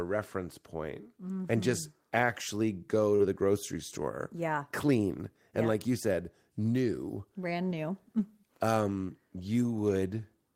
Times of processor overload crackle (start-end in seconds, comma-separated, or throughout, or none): none